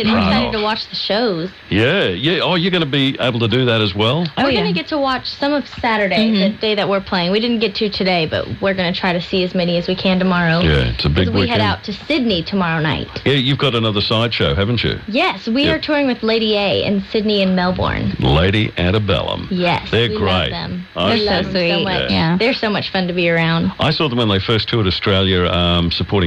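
Nothing goes wrong anywhere in this one; the sound just carries on steadily without a single glitch worth pointing out.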